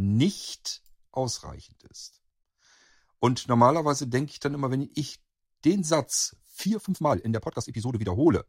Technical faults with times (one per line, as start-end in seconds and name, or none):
6.61-8.48 time-stretched section